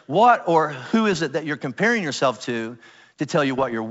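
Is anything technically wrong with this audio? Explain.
Yes. Two short stretches of rough, popping crackle break into the speech: from 1.13 to 1.20 s, between "what or who" and "it that you're comparing", and again from 3.58 to 3.75 s. These are bit errors on an ADPCM link, carried here by the G.722 wideband coding, whose light upper-band hiss stays in the background. Even at a low error rate, each flipped bit knocks the decoder's step size and predictor off track. The damage therefore rings on for milliseconds as gritty bursts with brief jumps in level.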